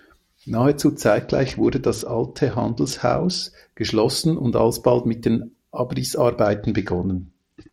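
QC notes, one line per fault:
1.23–3.43 s and 6.44–7.73 s, Bluetooth SBC bit pool drop: the treble dulls and gritty quantisation noise rises with no gaps, which fits the link falling from bitpool 28 to about 9 (78 kbps).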